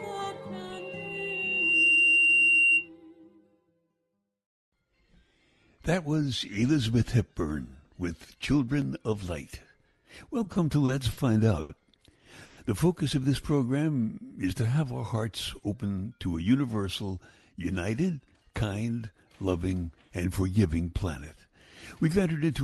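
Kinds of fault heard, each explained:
Loudspeaker feedback squeal: The microphone picks up the loudspeaker it feeds, and the loop gain passes one at a single frequency. From 0.72 to 2.89 s a 2.8 kHz tone swells over roughly a second until it sits about 5 dB above the wanted sound.
Repeated stalls (stutter): Packets arrive late enough that the jitter buffer empties several times in quick succession. Between 10.43 and 11.19 s playback halts four times, the longest hold 50 ms and about 120 ms stretched in total. The receiver extends the preceding sound each time, so nothing is lost but the passage drags and stutters.
Short stall from a late packet: A packet is missing when it is due, so the jitter buffer runs dry and the receiver holds the last sound until it arrives. Around 11.61 to 11.71 s the sound is held for 80 ms, then resumes where it stopped, with no content missing.
Call audio freeze: At 12.45 to 12.59 s playback stops and the last sound is continued as a brief decaying fill lasting 120 ms, never dropping to silence, before resuming where it stopped. 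The likely cause is packets held up in transit, which leaves the jitter buffer empty until they arrive.
Jitter buffer speed-up: After late packets arrive together, the buffer holds more than its target, so the receiver trims short pitch-period slices to reduce delay. From 15.56 to 16.45 s the audio runs at 111% speed at unchanged pitch, losing about a tenth of a second and sounding hurried.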